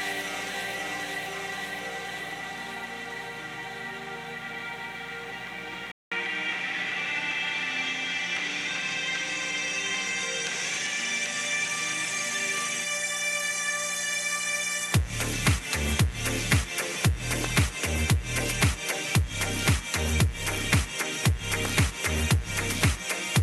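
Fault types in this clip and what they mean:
Mains buzz: Switching spikes at 60 Hz and its harmonics leak into the path, giving a steady raspy buzz roughly 25 dB below the signal for the whole clip.
Input switched to a poorer device: At 5.92 s, after a 200 ms gap, the sound turns duller and about 5 dB quieter, with nothing above 11.9 kHz and a new noise floor roughly 40 dB down, likely from a change of input device.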